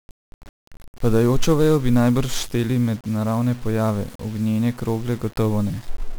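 Speech, and the whole thing has gone through 1-bit DFPWM compression. With only one bit per sample nudging an adaptive level up or down, you get thick broadband noise: everything's fuzzy and crackly, the top end is drowned in hiss, and the heavy damage suggests a stream of around 48 kbps.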